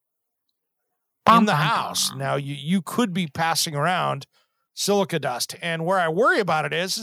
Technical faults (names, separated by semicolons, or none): microphone overload; microphone volume stepped down